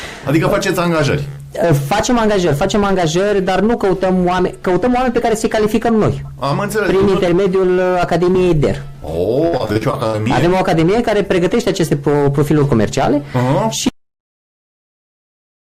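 From 9.47 to 10.27 s there is repeated packet loss with a robotic sound: a rapid run of short holes, the longest about 67 ms, each patched by stretching the preceding sound. Roughly a third of that stretch is concealed. The patching is what separates it from a true dropout, giving a choppy, robotic stutter.

At 13.89 s the audio drops out to silence and stays silent to the end. Unlike the concealed holes earlier, nothing fills this gap. It is dead digital silence with no room tone, most likely from the input being lost while recording continued.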